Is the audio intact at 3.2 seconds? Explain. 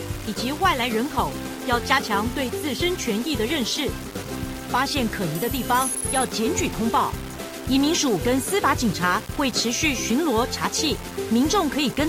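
No. The audio was likely requantised to about 5 bits by plain rounding with no dither, and this low bit depth without dither runs through the whole clip, including 3.2 s. The rounding error tracks the signal, so at this moment there is grainy distortion that shifts with the sound, sitting only about 15 dB below it, and quiet passages turn gritty or sputter.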